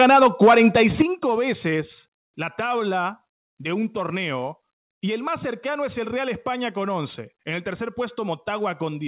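Microphone overload runs from 0.0 to 1.02 s. The loudest peaks are sheared flat, about 6 dB past full scale, giving a hard, crackling edge to the strongest syllables. A small but steady share of the waveform is squared off, likely from input gain set too high for the converter.

A microphone volume stepped down fault comes first at 0.03 s, when the level falls about 3 dB in one step. It returns at 1.02 s with a much larger drop of about 8 dB, which ends the clipping, and again at 2.04 s with a drop of about 2 dB just before "la tabla de un". Each step changes the voice and the room sound together, which likely comes from the call software automatically lowering the device's input gain after detecting overload. Throughout, nothing is heard above 4 kHz, which fits narrowband G.711 telephone coding.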